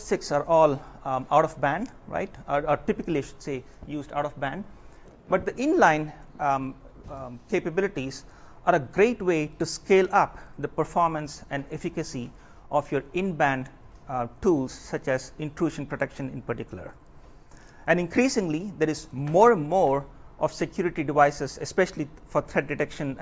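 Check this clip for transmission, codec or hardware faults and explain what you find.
No transmission, codec or hardware faults.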